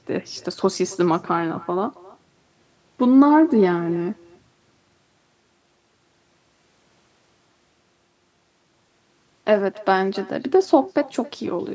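Throughout the speech, echo with no canceller is heard. The far end's loudspeaker feeds its microphone, returning a faint, thin copy roughly a third of a second later, about 24 dB down.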